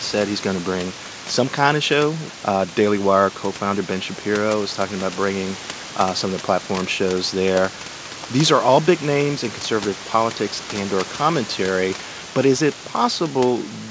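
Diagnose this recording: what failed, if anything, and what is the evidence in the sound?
Nothing in the signal chain has failed: the speech sits about 14 dB above a room noise floor that belongs to the recording itself, and the content stops at 8 kHz, which fits the normal band limit of a wideband call codec on a call path that is working as intended.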